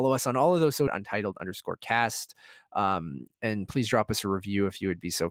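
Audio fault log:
0.87 s, skip ahead: The speech lurches forward with no pause at the join, as though a chunk of the sentence was simply never said, about 0.7 s of it, by the size of the jump. The audio on either side is spliced straight together with nothing filled in. A stretch was discarded, in transit or by an overfull jitter buffer, while later audio was already queued, so playback resumed from that newer material.
0.99–2.34 s, jitter buffer speed-up: Right after the jump the speech runs slightly rushed, at roughly 106 % of normal speed, yet its pitch stays where it was, so it sounds hurried rather than higher. The receiver was holding more buffered audio than it wanted and trimmed tiny slices, each a pitch period or a few long, over and over. Together they remove around a tenth of a second to bring the delay back down.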